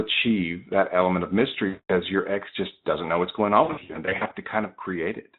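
At 1.67 to 1.95 s the speech breaks into VoIP packet loss concealed by the speech codec: about 220 ms of audio is missing, which fits eleven 20 ms frames. The decoder stretches its last pitch and filter into a sound that fades, and the voice stays weak after packets return. From 3.63 to 4.34 s a second burst of losses totalling about 340 ms, scattered over 680 ms with runs up to 60 ms, causes repeated brief smears against the light damage of the Speex coding.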